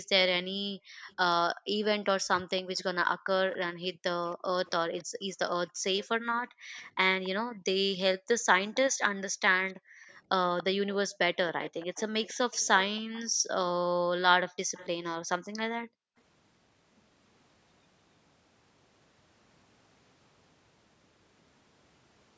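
From the start to 1.79 s the room background sinks away and comes back, the quiet under the speech falling by about 40 dB for roughly a second in total. This is background gated by the echo canceller: while the far end's loudspeaker audio was playing, the canceller pulled the microphone down hard and released it afterward. From 1.08 s to 13.23 s a faint copy of the speech trails the original by 282 ms, sitting roughly 20 dB below it. That is an echo leak, likely from a loudspeaker on the other side whose echo canceller let part of what its microphone heard get sent back. Inside that stretch the same gating returns from 3.89 to 7.66 s, with about a second and a half of the background dipping by about 40 dB, and from 9.32 to 11.19 s for under a second. It comes again from 13.28 to 16.16 s, about a second of affected background, and during that passage the delayed echo briefly resurfaces from 14.74 to 14.88 s at the same 282 ms lag and low level. 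Nothing is heard above 8 kHz, consistent with the call's microphone processing, which is expected there.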